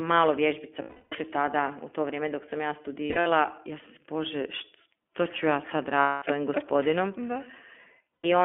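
Throughout, the speech sounds narrow and slightly rough and synthetic, with nothing below about 250 Hz or above 3.4 kHz. That is the iLBC codec at work, squeezing speech into a telephone band and coding each short frame independently, which fits its 15.2 kbps mode.

From 0.82 to 1.15 s, the speech gives way to a held, buzzy vowel that fades before the speech returns cleanly. These are lost iLBC frames: about 300 ms went missing, and the decoder filled the gap by repeating the last pitch cycle mixed with noise. From 3.06 to 3.27 s, the same artefact comes as several short stutters spread over about 200 ms, the longest run lasting around 70 ms. From 6.00 to 6.24 s, a 220 ms loss produces another sustained, breathy drone. From 8.15 to 8.26 s, a briefer 100 ms loss leaves a short buzzy hold. Each time, the speech snaps back almost immediately, which fits 20 ms frames decoded without relying on the previous one.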